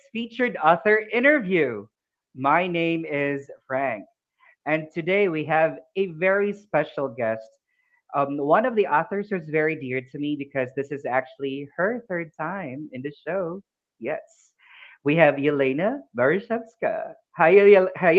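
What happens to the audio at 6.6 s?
Nothing goes wrong at 6.6 s: the audio carries on intact through that moment, with the band-limited, call-processed sound it has throughout.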